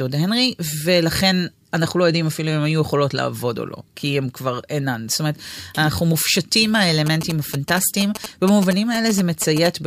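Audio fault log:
7.06–9.67 s GSM signalling bursts: galloping dit-dit-dit of brief 216.7 Hz buzzes, roughly 10 dB under the speech, as a nearby 2G phone's radio bursts are rectified in the audio circuit.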